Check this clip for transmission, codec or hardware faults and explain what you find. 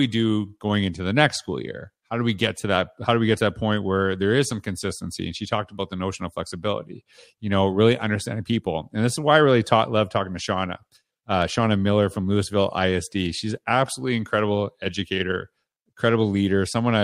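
There is one fault: clock slip clicks running through nearly the whole speech clip, from 0.14 s to 16.92 s. Faint ticks recur about every 0.15 s, around a hundred in all, each a single-sample jump. The likely cause is two free-running clocks differing by roughly 150 ppm, so a sample is dropped or repeated whenever the drift totals one sample. Unlike random crackle from a bad connection, the ticks keep a strict, even rhythm.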